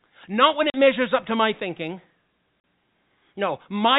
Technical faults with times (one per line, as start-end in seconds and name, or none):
0.70-0.74 packet loss filled with silence
2.60-2.64 packet loss filled with silence